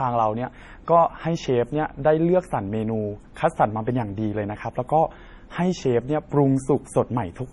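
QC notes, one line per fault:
Throughout, MP3 compression: the speech has a watery, swirling quality, with a hard ceiling on the treble and nothing at all above 11.5 kHz, so s sounds lose their sparkle and turn dull and metallic. The damage is heavy and is likely from an MP3 encoder starved of bits, which fits a rate of about 32 kbps. It cuts the top band outright and lets weak frequency detail flicker in and out between frames.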